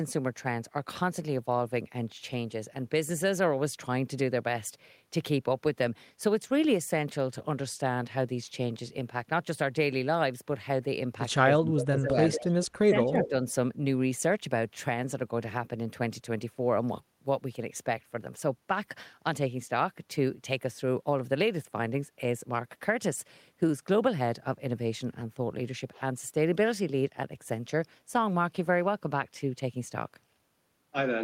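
A speech recording with two overlapping faults between about 11.4 and 13.3 s. Speech suppressed in double talk occurs from 11.43 to 12.17 s and from 12.39 to 13.34 s. The voice dips by up to about 20 dB and then about 25 dB, over roughly half a second and 0.7 s, likely because an echo canceller turned everything down while both sides spoke. Echo leak appears at 11.8–12.1, 12.32–12.43, 12.63–12.67 and 13.24–13.29 s as scraps of a copy delayed by 145 ms, about 10 dB below the speech (about 20 dB at 12.63 s). This is likely loudspeaker pickup that one side's canceller failed to remove.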